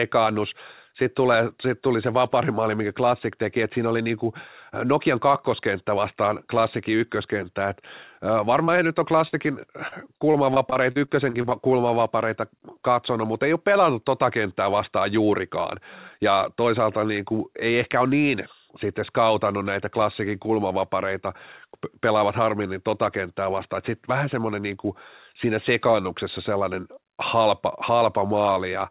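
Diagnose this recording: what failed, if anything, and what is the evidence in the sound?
Network stage, first a short concealed packet loss at 8.64 to 8.70 s. Roughly 40 ms never arrived in time, and the receiver bridged it by extending the preceding sound for about 36 ms before blending back in. You hear it as a quick smear in the speech.

Then there's a burst of packet loss from 9.28 to 9.47 s. About 40 ms went missing in one go. The concealment stretched the last sound into a held, fading fill of about 48 ms, and around 6 ms was dropped as playback caught up, so the speech resumes slightly further along.

The worst is the repeated packet loss (robotic sound) between 9.88 and 11.53 s. There are eleven separate holes, none longer than 40 ms, each patched by continuing the previous sound. About 17% of that stretch is fill, which gives the choppy quality. The band-limiting, with nothing above 4 kHz, fits a G.711 mu-law call path.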